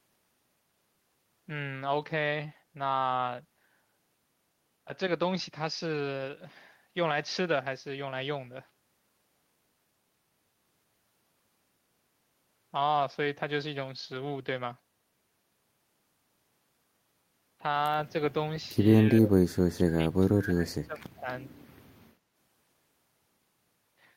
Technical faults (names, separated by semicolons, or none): speech suppressed in double talk